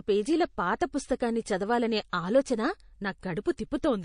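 A speech clip with plainly audible codec damage throughout: dulled treble, a watery, swirling quality and smeared consonant attacks, which likely come from MP3 compression at a low bitrate that fits about 40 kbps, where the encoder cuts high frequencies and lets weak spectral lines flicker between frames. Pre-echo appears twice. The first is a hiss of about 29 ms from 2.10 to 2.13 s, just after "పుస్తకాన్ని చదవాలనే", rising about 16 dB. The second is about 26 ms long, from 3.43 to 3.46 s, rising about 12 dB. The encoder stayed on long blocks of about 52 ms, so quantisation noise sized for each attack spread into the quiet moment before it.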